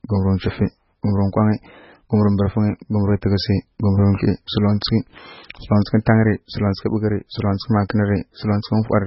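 Throughout the speech, heavy MP3 compression is the likely cause of a hard treble cut at 5.6 kHz and a watery, swirly texture, which fits a bitrate near 16 kbps. At 7.89 s, pre-echo places a brief hiss about 10 ms ahead of a sharp attack, because block-spread quantisation noise fills the quiet gap and softens the onset.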